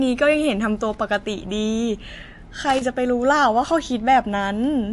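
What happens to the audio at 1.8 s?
At 1.8 s the speech carries the same damage heard across the whole clip, likely from MP3 compression at a low bitrate near 48 kbps. Starved of bits, the encoder removes everything above 11.3 kHz and drops weak frequency lines frame by frame, giving a watery, swirly tone. A spectrogram shows a flat ceiling at 11.3 kHz and flickering gaps beneath it.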